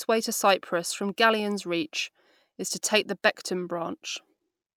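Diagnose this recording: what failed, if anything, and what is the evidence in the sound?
Nothing failed here: no stage in the chain, from the wiring through to playback, leaves a mark on this speech that a listener can hear.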